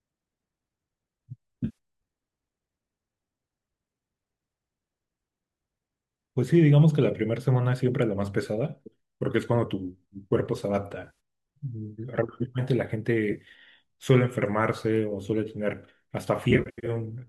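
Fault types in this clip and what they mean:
AAC frame loss with concealment: lost frames patched from the preceding spectrum, heard as brief smeared, phasey patches of 0.1 to 0.25 s rather than clean silent gaps.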